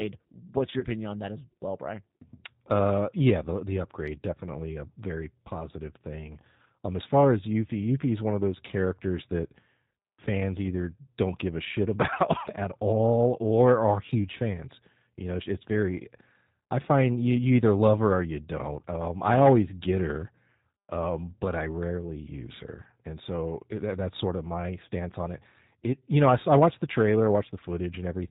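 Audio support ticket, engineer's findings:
G.729 codec, whole clip: speech band-limited to below 4 kHz, plainly rough and synthetic texture throughout. The sound is consistent with G.729A at 8 kbit/s. The decoder resynthesises speech from a vocal-tract filter, pitch predictor and sparse pulse excitation per 10 ms frame. Upper band is discarded and fine detail is replaced by a coarse pulse model, giving the buzzy, artificial edge.

VoIP packet loss concealed by the speech codec, 0.79–0.86 s, just before "on that as well": about 40 ms of audio missing, fitting two 20 ms packets dropped. The decoder extrapolated from the last pitch and filter with decaying gain, stretching the sound into a brief fading buzzy tone or coloured noise. Frame-to-frame dependency leaves recovery weak until the state rebuilds.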